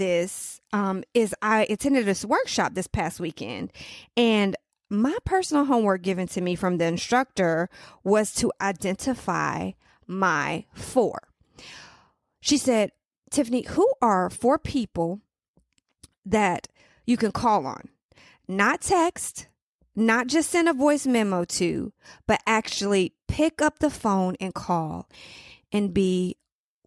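No technical faults are audible anywhere in this recording.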